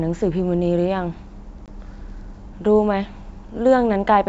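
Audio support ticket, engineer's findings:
Packet loss on an ADPCM call at 1.66–1.69 s: 20 ms hard-edged silent gap, speech re-enters slightly distorted. Waveform: flat hole, then briefly distorted resumption.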